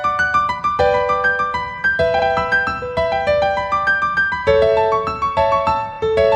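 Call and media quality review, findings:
Stutter at 2.18–2.26 s: a 78 ms stretch of audio plays twice in a row, adding 78 ms. Repeated frames in the encoded stream; the span fits three frames of about 26 ms each being written or sent again.

Shorter stutter at 5.92–5.97 s: a 26 ms block plays three times in total, adding 52 ms. Repeated frames again, consistent with a single compressed frame being duplicated twice before decoding.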